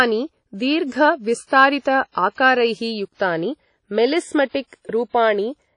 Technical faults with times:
0.00-5.77 WMA compression

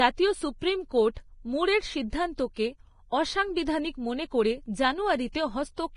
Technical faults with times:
0.00-5.97 Vorbis compression
1.14-1.17 pre-echo
3.65 pre-echo
5.32-5.35 pre-echo

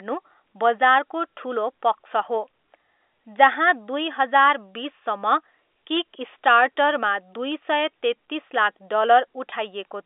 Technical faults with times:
9.50-9.52 packet loss with pitch repetition

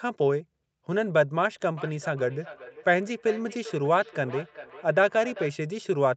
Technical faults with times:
1.77-5.59 feedback echo between two devices

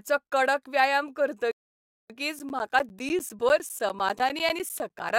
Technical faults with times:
1.51-2.10 rebuffering stall
2.39-5.10 periodic USB or driver dropouts

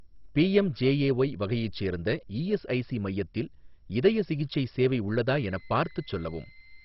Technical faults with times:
0.00-6.85 MP2 compression
5.29-6.85 switching supply whistle

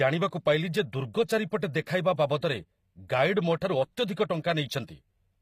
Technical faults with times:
0.00-5.42 HE-AAC compression

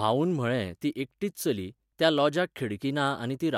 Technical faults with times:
none

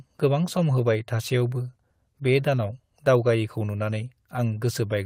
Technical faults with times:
0.00-5.05 clock drift between sender and receiver
0.08-4.86 repeated timing corrections

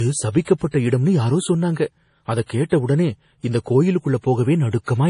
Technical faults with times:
0.00-5.10 MP3 compression
0.30-0.47 pre-echo
2.46-2.49 pre-echo

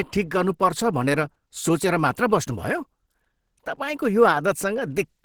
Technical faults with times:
0.00-5.24 Opus compression

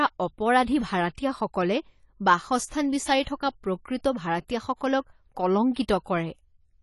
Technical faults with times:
0.00-6.83 AAC compression
3.23-3.27 pre-echo

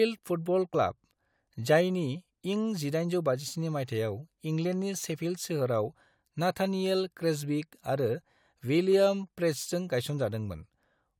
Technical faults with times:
0.73 compressed frames skipped

